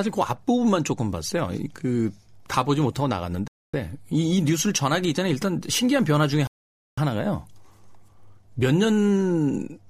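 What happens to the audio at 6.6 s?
The speech drops to silence from 6.47 to 6.98 s, then picks back up: a Bluetooth stall, likely the headphones' buffer running dry while delayed packets were resent.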